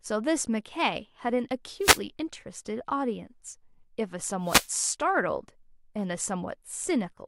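Speech with wireless microphone noise hits at 1.80–2.00 s and 4.43–4.72 s: radio fades let static swish through, showing as broadband smears on a spectrogram.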